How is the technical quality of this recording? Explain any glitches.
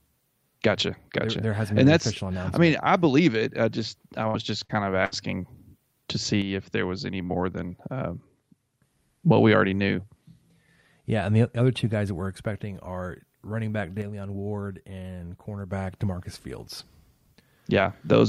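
The recording has two kinds of glitch, both short and clustered in a few spots.

Around 4.27, 4.64 and 5.05 s there's a burst of packet loss each time. The receiver stretches the last bit of speech for roughly 55 to 65 ms, fading it into a held buzz or hiss, then skips ahead with about 60 ms of speech gone.

From 6.42 to 8.82 s and again from 14.02 to 15.72 s, the level abruptly falls by about 6 dB and then jumps back. That's the signature of one channel dropping out, likely with the mono sum losing half its contribution.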